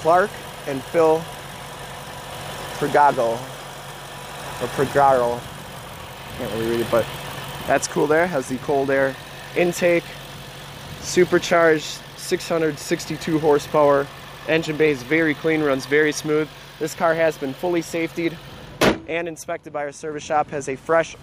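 From 19.85 s to the end at 21.22 s there's Wi-Fi interference: a faint, steady ticking, well below the main sound, repeating every 102.4 ms, about ten times a second. That's a nearby Wi-Fi radio's beacon being picked up and rectified by the audio circuit.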